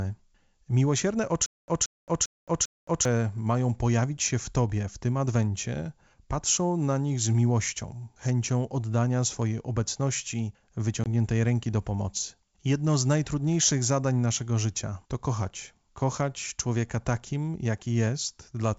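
From 1.46 to 3.05 s there's a stutter with silent gaps: a 178 ms snippet plays four times, each followed by 220 ms of dead silence, until "mają pojawić się w". It's likely a stalled stream replaying its last fragment.

At 11.04 to 11.08 s, between "chęcią oddania swojej obecności" and "ręki do pomocy", there's packet loss on an ADPCM call: a hard 20 ms hole, roughly one packet, after which the decoder is briefly out of step, so the speech comes back slightly off.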